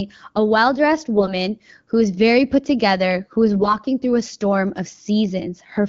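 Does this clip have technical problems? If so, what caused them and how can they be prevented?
Yes. There are two bursts of AMR bit errors. The first runs from 1.16 to 1.33 s, after "a well dressed" and before "who is very put". The second runs from 3.56 to 3.76 s, after "put together who is" and before "through a storm of". In both, pitch and level hold roughly steady, but the speech turns hoarse, scratchy and gargly. This happens on a weak radio link. The weakly protected bits in each frame arrive flipped, at an error rate that sounds like roughly 7 percent. The checksum on the important bits still passes, so the frames get decoded anyway. The excitation pulses then land in the wrong places, and the finer pitch, gain and spectral values come out wrong. Around these bursts, the AMR wideband (HD Voice) codec sounds clear, which fits a rate of about 12.65 kbit/s. Better radio coverage, or stronger channel coding on the link, would prevent these errors.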